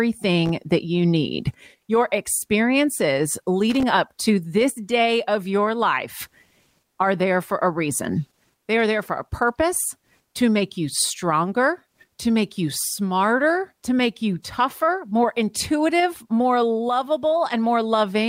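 At 0.46 to 0.49 s, and again from 3.70 to 3.83 s, there's a short, ragged burst of loose connector crackle in the speech: a worn or dirty contact flickering open and shut, chopping the signal into scratchy, irregular crackle.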